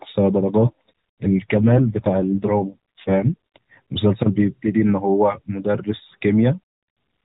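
An AMR rate drop runs from 1.54 s to 3.58 s in this speech clip. For those two seconds the voice turns rougher, buzzier and more synthetic, then recovers. The bandwidth stays the same and there is no gap. That pattern fits the link adapting from 12.2 kbps down to 5.9 kbps, with fewer bits left to describe each 20 ms frame. The rest of the clip carries the light, 4 kHz-limited coloration of AMR narrowband mobile coding.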